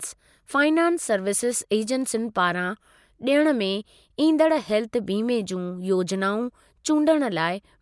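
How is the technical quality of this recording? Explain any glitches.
No technical faults can be heard in this recording.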